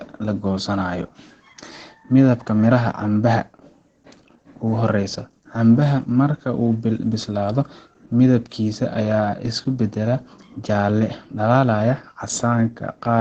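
Throughout the speech, Opus voice compression in SILK wideband mode, fitting about 12 kbps, leaves a muffled, hoarse, faintly robotic sound, with the spectrogram showing a hard ceiling near 8.9 kHz.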